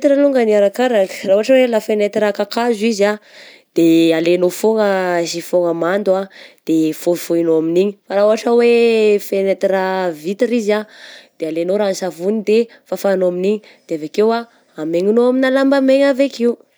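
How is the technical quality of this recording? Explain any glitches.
Nothing stood out as a technical problem when listening to this recording.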